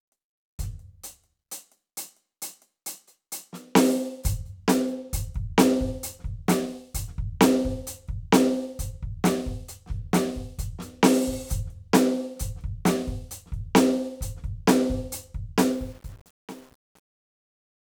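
From 15.69 to 17.81 s the music's fade-out gets truncation distortion: no dither, so the tail goes gritty, which fits an 8-bit stage.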